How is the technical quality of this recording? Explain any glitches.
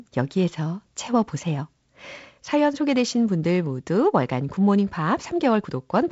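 Nothing stood out on listening to this speech recording, which comes through G.722 wideband telephone coding with its band ending at about 7.7 kHz.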